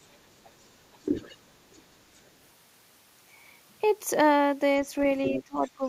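From 0.03 to 2.31 s a second, much fainter voice sits well below the speech. This is the other side's voice leaking through, likely loudspeaker echo the echo canceller failed to remove from the microphone. Between 0.63 and 1.56 s the talker's speech dips sharply in brief pieces, a fraction of a second in all. That is speech suppressed in double talk, likely because the canceller could not separate the talker from the overlapping echo and turned both down. From 4.76 s to the end the leaking voice returns, now only a little quieter than the speech, again likely from incomplete echo cancellation. From 5.28 to 5.84 s the talker is again pushed down in clear drops totalling under half a second, likely the same suppression while both voices overlap.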